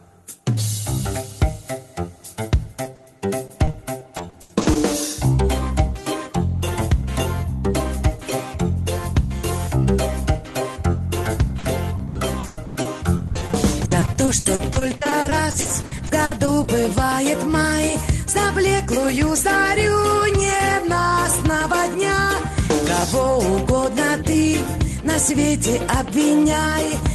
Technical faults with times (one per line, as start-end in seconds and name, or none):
2.83-2.99 short concealed packet loss
3.47-4.77 repeated packet loss (robotic sound)
11.59-16.67 repeated packet loss (robotic sound)